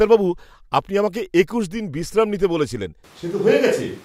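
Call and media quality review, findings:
Switch to a distant microphone, 3.04 s to end, after "দিন বিশ্রাম নিতে বলেছিলেন". Close mic likely dropped out, pickup falls back to a far mic. Sound turns suddenly roomy and hollow, thinner low end, level roughly unchanged, room noise around 30 dB under the speech.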